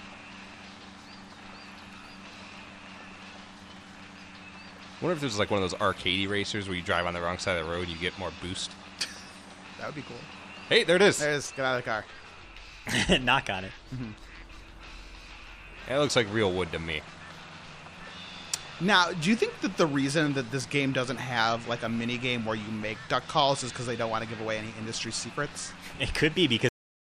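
A cut-off end at 26.69 s stops the audio abruptly in mid-sound, followed by 0.47 s of digital silence with no natural decay. The final buffers were never written or played back, so the recording ends before the sound itself does.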